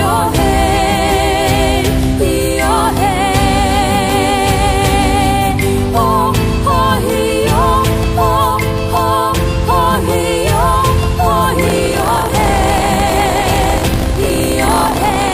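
From 11.6 s to the end, buffer tearing: write and read pointers have slipped and cross inside each 20 ms period, so roughly a tenth of every buffer holds audio from about 70 ms earlier. The hard joins produce a robotic 50 Hz rattle under the signal.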